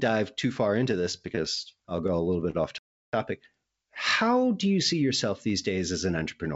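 Repeated stalls (stutter) run from 0.92 to 2.57 s in this speech clip, starting just after "too far": about fifteen brief hitches, the longest 38 ms, where late packets drained the jitter buffer and the receiver stretched the last sound to cover about 0.21 s, roughly 13% of that span, so nothing is lost but the audio drags. A playback stall follows from 2.78 to 3.13 s, a 0.35 s silence in mid-flow, likely from the player running out of data or its thread being blocked before output resumed. The band stops at 7 kHz, consistent with a wideband call codec on the path.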